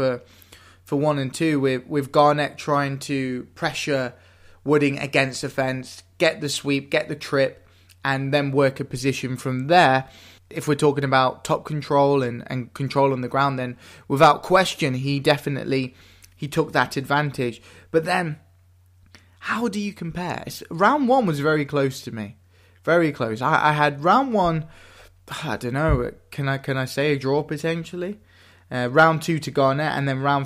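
No technical faults occur at any point in the speech, so there is nothing to describe in time order.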